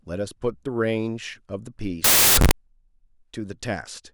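At 2.04 s the speech suddenly turns into a blast of loud, harsh broadband noise that runs until 2.51 s, a bit under half a second. That's samples built from the wrong bytes. The reader assembled each sample from misaligned or swapped bytes, so the jittery low-order bits ended up as the big part of every value.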